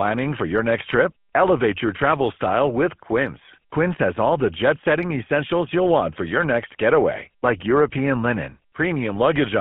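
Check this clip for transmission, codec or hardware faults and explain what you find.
There's one fault, present for the whole clip: GSM full-rate codec damage. The speech is squeezed into a narrow line band, roughly 150 Hz to 3.4 kHz, and is rebuilt at 13 kbps by a vocal-tract model driven by sparse, regular pulses, leaving it plainly buzzy and gravelly throughout.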